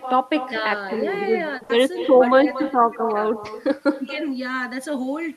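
Throughout the speech, an echo with no canceller is present: the far end's loudspeaker feeds back into its microphone and nothing removes it. Every phrase returns about a fifth of a second later, around 13 dB quieter, as a thinner shadow trailing the original.

From 1.57 to 1.63 s, a short concealed packet loss occurs. About 40 ms of audio never arrived, and the decoder extended the preceding sound to fill it. This produces a brief smear before the real signal resumes, rather than an audible gap.

Directly after, from 1.63 to 1.71 s, a burst of packet loss removes about 60 ms. The concealment holds the last sound and fades it as the gap lengthens. The result is a decaying buzz or hiss, after which the speech picks up further along.

Lost packets rebuilt from error correction appear at 1.69–1.71 s, 1.73–1.75 s, 2.05–2.07 s and 2.21–2.23 s, each 20 ms long. A low-bitrate copy carried in the following packet was decoded in place of the lost frame. 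These frames come through with no gap but sound rougher and noisier.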